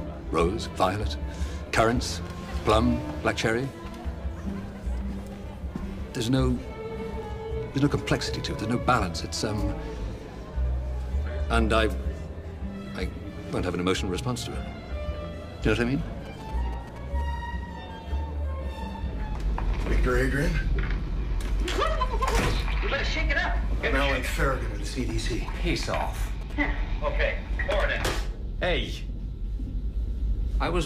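A GSM phone close to the recording chain was exchanging signalling bursts with its network, and the audio circuitry rectified that radio energy into the signal. The result is GSM signalling bursts from 16.26 to 17.22 s and again from 25.00 to 26.52 s: a galloping dit-dit-dit of ticks and short buzzes at about 217 Hz, the phone's burst repetition rate, sitting roughly 15 dB below the wanted audio.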